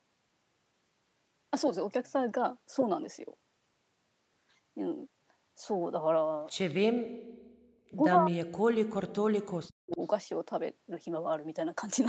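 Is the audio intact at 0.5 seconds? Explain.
Yes, the speech at 0.5 seconds is intact, with no fault at that moment.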